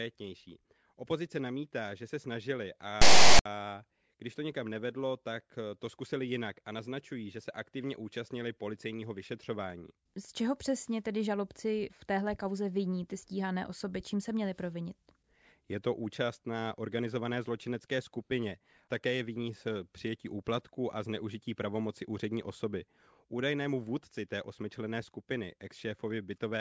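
A speech recording is interrupted by file tags played as audio from 3.02 s to 3.46 s. For about 0.44 s, a harsh rasp cuts in with hard edges, lopsided toward one side of the waveform. That rasp is text from a tag block, read as if the character bytes were samples. The burst ends in dead silence, where the zero padding after the text is also read as audio. Then the speech resumes abruptly.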